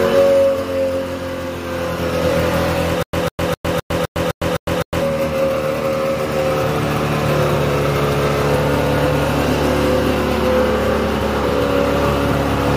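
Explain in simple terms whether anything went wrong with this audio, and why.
Stutter with silent gaps, from 3.03 to 5.02 s. In that stretch the same 150 ms snippet of sound plays eight times, each followed by about 106 ms of complete silence, so it pulses at a steady rhythm of roughly four times a second. This likely happened because the player stalled: each time it tried to resume, it replayed the last piece it had, then ran dry. The audio that belonged in those two seconds is missing.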